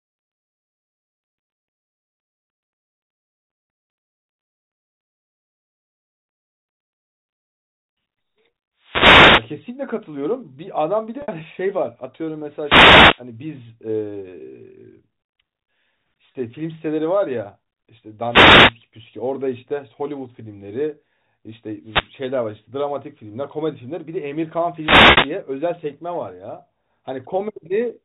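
Wireless microphone noise hits arrive at 8.78 to 9.58 s, 12.60 to 13.23 s, 18.28 to 18.75 s, 21.83 to 22.12 s and 24.76 to 25.38 s. Each is a burst of static as the FM radio path fades and receiver noise swells over the voice. Unlike a digital dropout, the sound is masked rather than removed. Packet loss with pitch repetition falls between them at 11.22 s (60 ms), 16.32 s (30 ms) and 25.11 s (60 ms, inside the last hiss). Each time the receiver loops the last pitch period and fades it out: the 30 ms loss leaves a brief held, buzzy tone, while the 60 ms losses fade into silence before the speech returns, instead of static. Those gaps fit 30 ms packets. Beneath all this the G.711 telephone band stops at 4 kHz.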